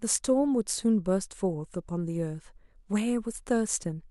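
Nothing in this bit of speech stands out as a technical problem; there's no glitch or dropout to point to anywhere along the way.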